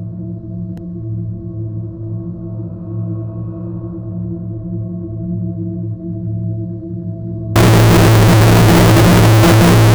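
From 7.56 s to the end of the clip at 9.94 s, the sound turns into a loud, harsh, buzzing block: the waveform flattens toward a near-square shape held at an almost constant high level, so quiet background noise comes through as loud as the main sound. This is float read as integer, likely 32-bit floating-point samples decoded as 32-bit integers, so each sample's sign and exponent bits, not its true value, set the output level.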